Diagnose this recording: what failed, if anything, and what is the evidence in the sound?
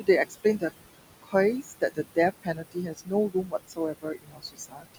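Noise suppressor artifacts, from call processing. The room noise is pulled down about 19 dB between phrases. What remains rises again under the words.

Speech cut by the noise suppressor, at the same stage. Soft speech at 0.29–0.63, 1.22–1.34, 1.63–1.99, 2.42–3.12 and 3.3–4.97 s sounds swallowed. The suppressor mistook it for noise and cut it by up to about 21 dB.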